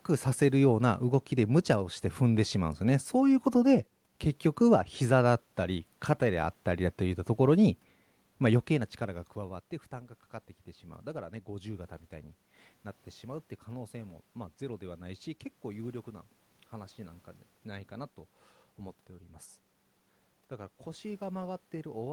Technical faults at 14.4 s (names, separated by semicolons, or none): none